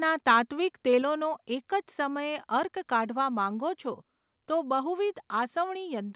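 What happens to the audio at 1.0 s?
At 1.02 s the speech and its background drop together by about 4 dB in a single step, most likely the microphone volume being stepped down because the call software judged the input too loud, so everything after continues at that lower level.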